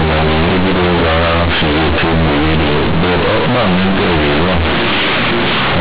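From start to finish, the speech has been encoded as G.711 A-law but played back as plain linear 8-bit samples, so the companded bytes are never expanded: companded audio read as linear. Because A-law codes carry sign in the top bit, every zero crossing throws the output across roughly half its range, and quiet passages come out as loud as peaks. The result is a harsh, overdriven buzz, with heavy noise filling the pauses, over the narrow telephone band of the A-law coding.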